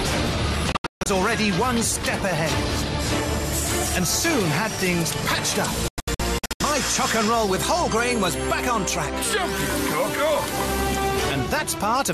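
Two bursts of digital broadcast dropout here: at 0.72 to 1.06 s the audio mutes in short holes totalling about 264 ms, then again from 5.88 to 6.61 s, about 384 ms lost. The receiver dropped bad frames and muted with quick 3 ms fades, so that audio is simply gone.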